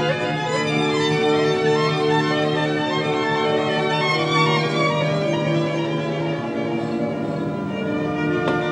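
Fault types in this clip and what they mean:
Doubled audio track: the whole clip carries a second full-band copy of itself trailing about half a second behind, sitting roughly 5 dB under the original, so every onset gets a clean repeat with no decay or room colour on it. The cause is likely a second capture through a slower path, or an edit holding two copies out of step, summed back into the mix.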